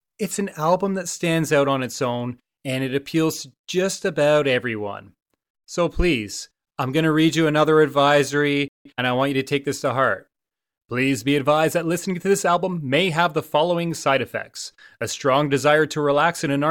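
A speech clip with two linked faults near the middle. At 8.68 s the sound cuts out in mid-flow. Silence holds until 8.86 s, a gap of about 172 ms. This is a playback stall. The player most likely ran dry of buffered data, or its output thread was held up, so nothing reached the output. The second fault is time-compressed catch-up, from 8.86 s to 9.02 s. Here the player works off the backlog left by the stall. It drops short slices of audio and cross-fades across the joins. The speech runs at 2.0 times normal speed for this stretch. Pitch stays normal, so the voice sounds hurried rather than raised.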